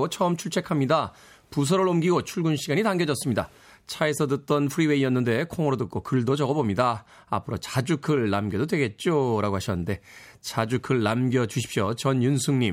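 No technical faults are audible.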